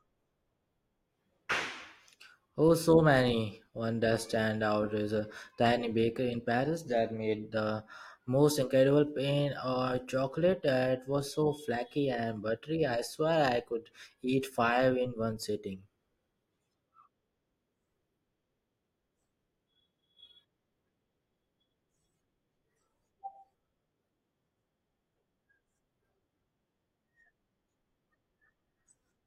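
At about 3.32 s the speech jumps ahead slightly, a case of compressed frames skipped: roughly one frame, something like 20 ms of audio, never got played, probably damaged or missing.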